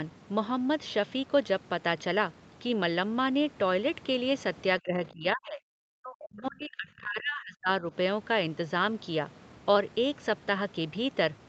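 From 4.8 to 5.61 s, and again from 5.99 to 7.93 s, the speech sinks abruptly and breaks into pieces, most likely speech suppressed in double talk: the echo canceller, unable to tell this talker from the far side's loudspeaker echo, turned both down. The first dip reaches roughly 30 dB, the second about 40 dB. On a waveform the envelope collapses in ragged chunks; a spectrogram shows energy vanishing below the 8 kHz ceiling of the call path.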